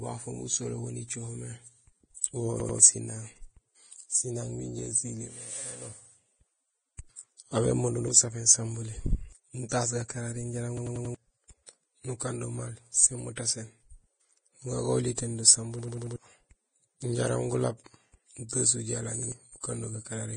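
Right from the start, the whole speech clip has that hissy, grainy texture, with nothing at all above 9.7 kHz. That points to heavy low-bitrate compression, likely Vorbis at somewhere around 23 kbps. The codec has chopped off the top end and quantised what's left of the treble so coarsely that the detail turns into noise, which is why consonants sound rough and edges blur.

Then the repeated buffers kick in. At 2.60 to 2.79 s, the same 93 ms chunk plays twice more with a hard seam at each join, so you hear a quick stutter and lose about a fifth of a second of audio. It happens again at 7.99 to 8.08 s (one extra play, roughly 100 ms gone) and at 10.77 to 11.15 s (four extra plays, around 400 ms lost). The same four-repeat stutter comes back at 15.79 to 16.16 s, and a single repeat turns up at 19.23 to 19.32 s. Each time, fresh audio didn't arrive in time, so the device just replayed its last block. 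The 93 ms length fits a 4096-sample buffer.

Right near the end, at 19.60 to 19.64 s, there's pre-echo. A short smear of hiss, about 33 ms long, comes in just ahead of an attack. The codec spread its noise across the whole transform block, so the noise meant for the loud onset leaked into the quiet moment before it, and the attack itself loses its crispness.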